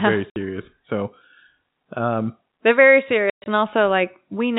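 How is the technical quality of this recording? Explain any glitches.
The recording has two dropouts from packet loss filled with silence, heard through a telephone-band channel with nothing above 4 kHz. At 0.30 to 0.36 s a 60 ms hole cuts the speech, which fits three 20 ms packets going missing. At 3.30 to 3.46 s, right after "um they're very", about 140 ms drops out across 160 ms, the longest gap running 120 ms. In both places the receiver inserts digital silence, so the speech stops abruptly at hard edges.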